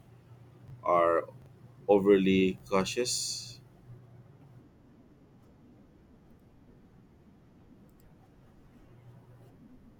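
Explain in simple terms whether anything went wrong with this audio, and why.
Three brief garbled blips interrupt the speech, at 0.68 to 0.72 s, 1.42 to 1.46 s and 2.58 to 2.62 s. Each is chunks out of order: a 20 ms piece arrived one chunk late and played after its neighbour, so nothing is missing, but the order jumbles.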